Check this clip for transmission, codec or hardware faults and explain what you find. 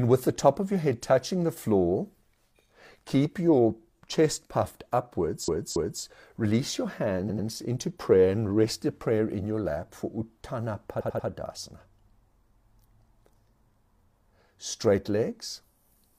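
Repeated frames stutter this speech three times. After "keep your chest puffed" at 5.44 s, a 278.6 ms block plays twice more. After "release your" at 7.25 s a 92.9 ms block repeats, and at 10.96 s another 92.9 ms block repeats. Duplicated compressed frames make the decoder replay each slice, lengthening the audio.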